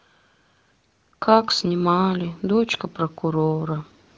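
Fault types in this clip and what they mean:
No faults found: the speech runs through the AMR wideband (HD Voice) codec at a rate high enough to keep it clear, with any coding effects at most faint.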